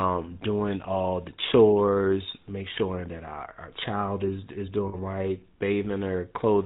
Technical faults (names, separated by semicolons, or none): GSM full-rate codec; lost GSM frames